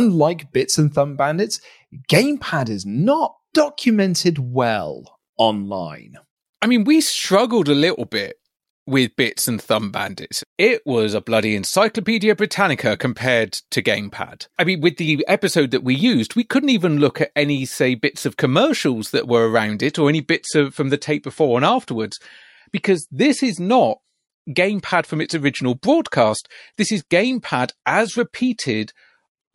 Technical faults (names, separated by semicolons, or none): adaptive stream at a lower bitrate